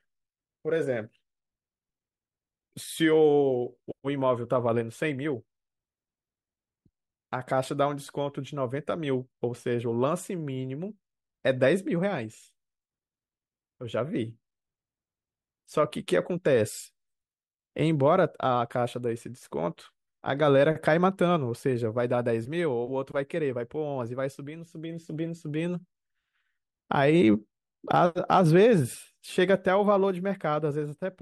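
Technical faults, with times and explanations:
No technical faults can be heard in this speech recording. There is nothing to list with a time.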